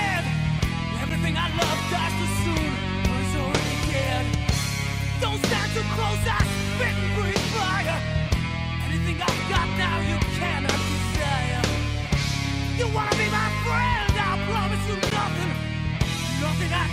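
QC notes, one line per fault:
1.09 s and 15.10 s, gap between stream segments: two short holes of silence with hard edges, about 9 ms at the first and 11 ms at the second. Each sounds like a tiny dropout that snaps in and out. The timestamps of two neighbouring chunks don't quite meet, so the player pads the gap with silence. Nothing gets cut from the audio; the dead air is simply inserted. The timing fits a stream cut into 2-second segments.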